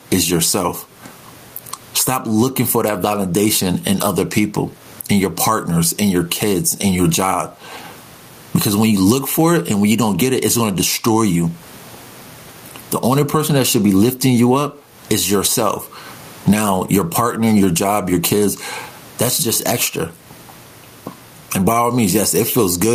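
Speech throughout shows gain pumping, with a gain swing of around 20 dB; the room noise sits about 43 dB below the speech; the pumping is likely from an overdriven limiter.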